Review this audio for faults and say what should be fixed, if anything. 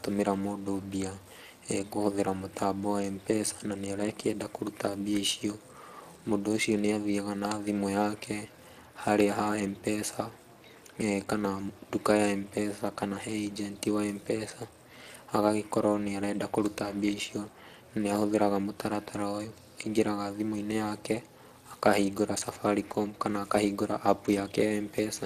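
Speex codec damage runs through the whole speech clip and is plainly audible. Speex is a CELP coder: it models the vocal tract with a filter and spends a limited bit budget on the excitation signal, so the coarsely coded excitation adds a rough, noisy texture to the speech. The damage level points to a mid-range setting, around 22 kbps. Nothing is present above 15.3 kHz. To prevent this, record and transfer the source uncompressed, or use a modern codec such as Opus at an adequate bitrate.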